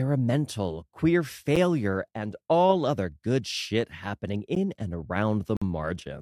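Gaps between stream segments at 1.56 s, 4.55 s and 5.57 to 5.62 s, where mistimed 1 s segments leave brief hard-edged silences, visible as clean vertical blank strips.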